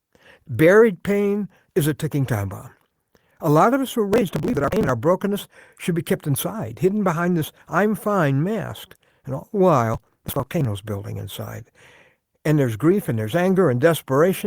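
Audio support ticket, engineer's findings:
Processor overload crackle. CPU missing audio buffer deadlines in runs, each late block of roughly 10 ms skipped outright. Audible as gritty tearing over the speech, 4.13–4.89 s (after "lot of us were", before "brokenness should be kept") and 9.94–10.65 s (after "all the", before "building inside"). Dozens of drops per burst.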